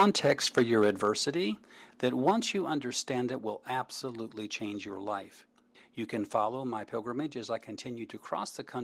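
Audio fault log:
0.00–1.08 s, microphone overload: The input level was likely set too high for the converter, driving the speech peaks about 10 dB past full scale. A small share of the waveform has its tops sheared flat, so the loudest syllables in this opening second carry a harsh, crackling edge instead of a clean rise and fall.
1.02 s, microphone volume stepped down: Near the end of that distorted stretch, the call software likely reacted to the clipping by cutting the device's input gain in a single jump of about 5 dB. Speech and background together drop abruptly in level at this instant, with no gradual fade.
2.04–2.31 s, microphone overload: The lowered gain likely still left too little headroom, and peaks are pushed about 4 dB over the converter's limit. A small fraction of samples are flattened, giving this brief quarter-second a gritty, crackly edge on its strongest syllables, milder than at the start.
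2.31 s, microphone volume stepped down: Right after that second distorted burst, the input gain was likely trimmed again in one step of about 4 dB. The whole signal, speech and background alike, falls suddenly quieter from this point, a second audible drop following directly on the clipping.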